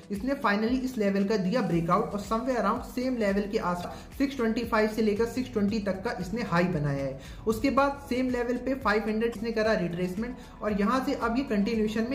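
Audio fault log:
3.80–3.85 s and 9.32–9.36 s: damaged data in a compressed stream. Each event is a brief blip of about 44 ms. Corrupted bytes in the compressed data make the decoder misread those frames and lose sync. It then hunts for the next valid frame header.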